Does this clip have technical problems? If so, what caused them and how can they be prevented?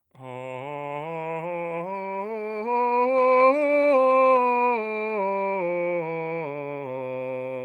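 No, this music clip has no technical problems, so there is nothing to prevent.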